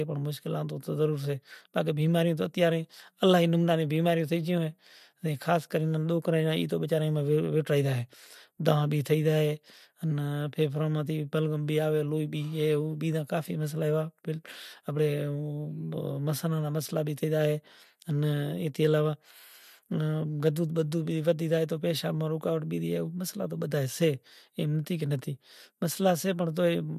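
Nothing in the speech recording stood out as a technical fault on listening.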